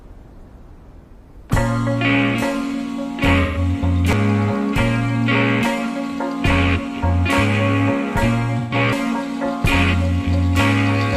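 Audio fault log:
3.42–3.58 s and 8.58–8.74 s, AAC frame loss with concealment: in each span about 128 ms of audio, which fits three lost frames, is replaced by the decoder's estimate from the last good spectrum. It is heard as a brief smeared, noisy patch rather than a dropout to silence.
4.13 s and 8.93 s, audio missing between chunks: at each point about a fifth of a second of sound is skipped and the two sides are butted together without a gap. The likely cause is a recorder or processor handing over between chunks of roughly 5 s.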